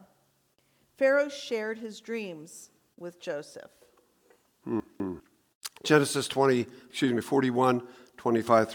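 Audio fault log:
4.80–5.20 s, chunks out of order: the speech briefly jumbles, with a scrambled moment. One 200 ms chunk arrived one slot late and played after the chunk meant to follow it, so nothing is missing, but the swapped order leaves three hard joins.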